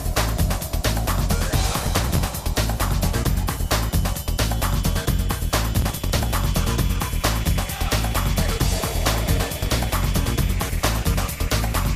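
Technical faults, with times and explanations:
1.69–2.19 s, 5.77–6.27 s and 9.61–9.84 s, processor overload crackle: dozens of tiny buffers, each a few milliseconds long, miss their deadline and are skipped. The hard-edged gaps blur into gritty tearing.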